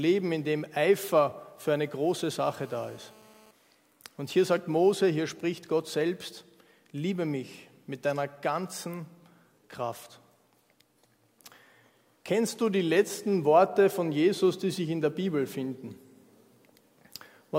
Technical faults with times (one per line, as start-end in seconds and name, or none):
2.44-3.51 GSM phone buzz